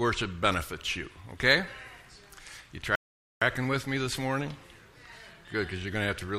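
At 2.95 s the sound stops dead and stays silent until 3.42 s, a rebuffering stall that adds about 0.46 s to the running time. Playback drained its downloaded audio and paused until more arrived, then picked up at exactly the point where it halted. That seamless resumption separates it from a dropout or packet loss, where audio goes missing and the sound jumps ahead. Here nothing is skipped; time is only inserted.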